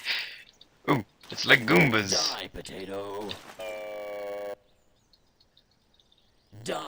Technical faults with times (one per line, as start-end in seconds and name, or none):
0.00-6.88 block size mismatch (padded)